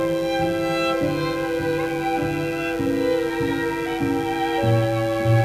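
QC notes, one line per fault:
Throughout, mains buzz: a steady, raspy buzz from 50 Hz harmonics stacking up into the kilohertz range, sitting roughly 20 dB under the signal. On a spectrogram it shows as evenly spaced horizontal lines.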